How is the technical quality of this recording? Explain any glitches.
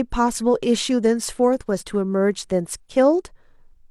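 The technical quality of this recording is sound, with no glitches to explain.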